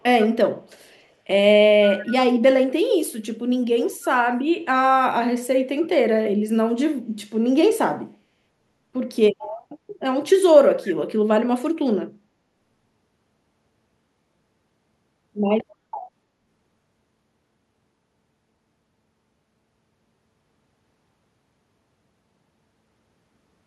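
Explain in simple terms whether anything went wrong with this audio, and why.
Echo leak from 0.65 to 1.0 s: a very faint repeat trails the speech by 0.3 s, likely from a loudspeaker, and sounds distinct rather than like room reverb.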